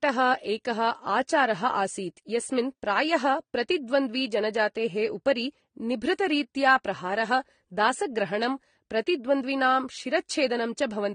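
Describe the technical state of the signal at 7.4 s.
At 7.4 s the speech sounds dull, with nothing above about 9.7 kHz, plus the artefacts of two different codecs heard together. This runs through the whole clip, not just this moment. The likely cause is transcoding between lossy codecs: the signature fits Vorbis near 46 kbit/s re-encoded as AAC-LC near 32 kbit/s, with the second encoder spending bits on the first one's artefacts, adding its own, and keeping the lowest bandwidth limit.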